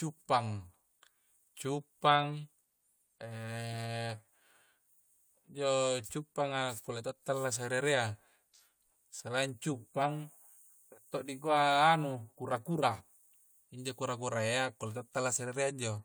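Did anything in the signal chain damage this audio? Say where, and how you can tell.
No, nothing in the signal chain has damaged this speech recording, and the signal holds together with no audible fault at any stage.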